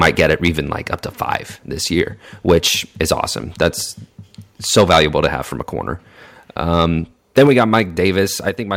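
The speech runs into what is likely microphone overload right from 0.01 to 0.48 s, then again at 2.48–2.58, 3.00–3.13, 3.62–3.68, 4.76–5.26, 6.79–6.83 and 7.37–7.80 s. The input is hot enough that the peaks hit the converter's ceiling by up to about 9 dB, so their tops get sliced flat and the loudest syllables pick up a harsh, crackly edge.

There's also a microphone volume step-down, likely the call software reacting to those clipped peaks: the whole level, voice and background together, drops abruptly by about 2 dB at 4.81 s, about 5 dB at 7.47 s and about 4 dB at 8.49 s.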